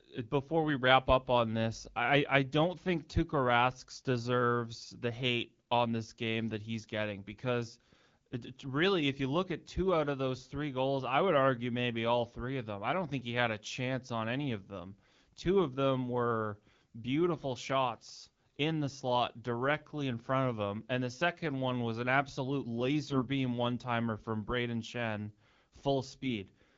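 A speech recording carried over wideband AMR at what sounds like a 12.65 kbit/s HD Voice rate, hit twice by AMR bit errors: around a few percent of the weakly protected bits flipped from 23.07 to 23.23 s and from 26.23 to 26.32 s. The misplaced excitation pulses turn the voice briefly hoarse and gargly there.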